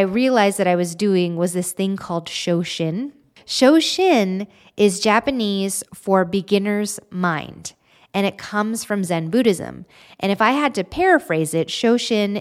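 Two sharp clicks interrupt the speech, at 4.41 s and at 8.20 s, the second falling between "for beginner's mind" and "it comes from". Each is likely dropped samples, a fraction of a millisecond missing from the stream, so the waveform jumps abruptly to a later value instead of continuing smoothly. The gap is too brief to lose any sound. On a spectrogram each click shows as a thin vertical line spanning the full frequency range.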